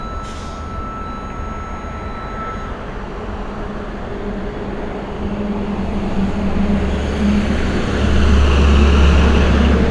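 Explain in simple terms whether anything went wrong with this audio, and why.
Nothing went wrong with this audio; there are no faults to point to anywhere in it.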